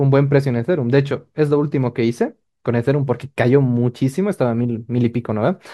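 Nothing in this speech recording stands out as a technical fault, so there's nothing to point to at any moment along the way.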